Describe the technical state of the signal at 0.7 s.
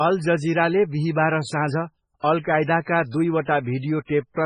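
Likely heavy MP3 compression, starved of bits as at roughly 16 kbps, runs through the whole clip: at 0.7 s the speech is watery and swirly, with nothing above 10.4 kHz.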